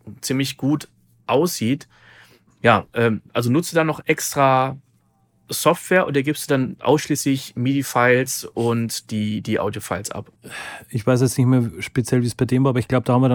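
From start to finish the speech carries a low buzz at about 43.1 Hz, and the pace stays at its normal speed with the pitch unchanged. This is a block size mismatch (truncated): one stage hands over longer blocks than the next one takes in, so the tail of every block is cut off. Each cut leaves a small discontinuity, and these repeat at the block rate, which fits a 1024-sample block.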